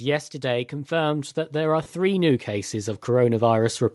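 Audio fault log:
throughout, Bluetooth LC3 compression: The speech carries a plainly audible breathy, grainy edge, and the upper band sounds thin and hazy rather than crisp. This is likely LC3, the transform codec of Bluetooth LE Audio. At this quality the encoder has too few bits for the upper spectrum, so it drops much of that detail and fills the gaps with shaped noise. The damage points to a rate around 48 kbps in 10 ms frames.
0.41 to 3.85 s, automatic gain rising: From 0.41 s the level climbs steadily, ending about 11 dB louder by 3.85 s. The speech and the background rise together. An automatic gain control judged the input too quiet and raised its gain over several seconds rather than in one jump. Because it scales everything it receives, the room noise between syllables grows along with the speech, which gives the gradual swelling effect.
1.83 to 1.86 s, lost LE Audio frames: For about 30 ms the speech gives way to a brief noisy smear in place of clean sound. 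This gap fits three consecutive lost 10 ms frames. The LC3 decoder hides the gap by reusing the last good spectrum with random signs, so the spectral shape carries on while its fine structure turns to noise. The loss is short enough that the smear hasn't faded far before real audio resumes.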